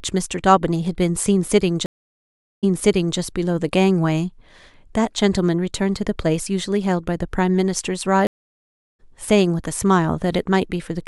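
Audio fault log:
1.86–3.18 s stream reconnect: The link drops, leaving 0.77 s of silence. A fresh decoder resumes 0.56 s earlier, replaying a resent burst of sound.
8.27–9.00 s stream reconnect: The connection breaks again for 0.72 s of silence. Playback restarts roughly 0.7 s later, so a stretch of sound is skipped.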